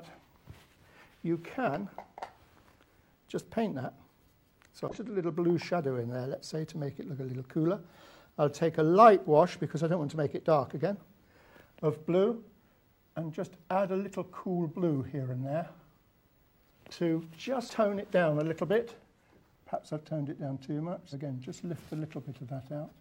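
The audio jumps forward four times where compressed frames were skipped: at 1.63 s (about 50 ms lost), 4.88 s (around a fifth of a second), 17.65 s and 21.09 s (roughly 100 ms each).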